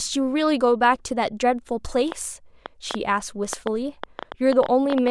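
From about 2.12 s through to 5.09 s there's a train of clicks riding over the speech, around fifteen of them at roughly 5.4 per second, spaced unevenly rather than ticking like a metronome. They're sharp and much alike, poking up to roughly 10 dB above the talking, and they carry on through the gaps too. The likely culprit is interference from nearby gear or a faulty connection or power supply spitting out pulses.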